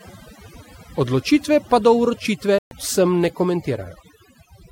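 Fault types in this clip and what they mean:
Overdone noise removal: The noise reduction was pushed too hard across the whole clip, so frequency bands near the noise floor get switched off along with quieter parts of the speech. The background drops and breaks up into little twinkling specks.
Bluetooth dropout: Around 2.58 to 2.71 s the sound cuts out for about 128 ms, then picks up further along as if it had kept playing underneath. That's likely packets missing their deadline on a wireless link to the headphones.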